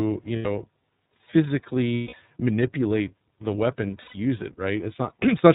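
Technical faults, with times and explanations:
Throughout, iLBC codec: the speech is band-limited to telephone width, with nothing above 4 kHz, and has a plainly audible rough, slightly synthetic edge. The sound points to iLBC at about 13.3 kbps with 30 ms frames, where each frame's excitation is coded on its own rather than predicted from the previous one. That keeps the voice intelligible but coarsens its texture and strips all the upper-band brightness.
0.36 to 0.46 s, 1.95 to 2.14 s (just before "manipulate the weapon") and 4.02 to 4.15 s (just after "manipulate the weapon"), lost iLBC frames: each gap is filled by a held, faintly buzzy, breathy vowel-like sound lasting about 90, 190 and 130 ms. Packets went missing, so the decoder repeated the last pitch cycle blended with noise, letting it fade over the longest gap. Since iLBC frames are independent, the voice returns almost immediately after each one.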